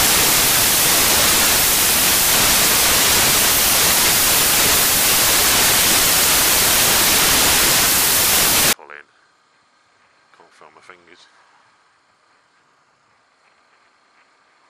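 The first 8.73 seconds are a wall of loud, harsh broadband noise: samples built from the wrong bytes. The reader is assembling each sample from misaligned or swapped bytes, so the jittery low-order bits end up acting as the big part of every value and the real signal is buried in hiss. After 8.73 s the bytes line up again and the actual sound comes through.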